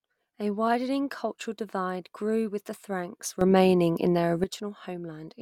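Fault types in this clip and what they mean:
Sudden gain jump: after "grew with the franks", speech and background noise jump about 11 dB together from 3.41 to 4.44 s, likely an unramped digital gain change.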